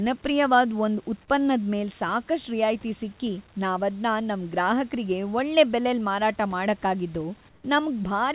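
From 7.49 to 7.64 s, right after "ಮಾರಾಟ ಮಾಡಕ್ಕಾಗಿದ್ದು", the room background turns flat and featureless for 150 ms and drops by about 3 dB, likely comfort noise in place of the background from a discontinuous-transmission pause. A spectrogram shows an even, textureless band below 4 kHz, and the waveform a slightly lower, uniform noise floor.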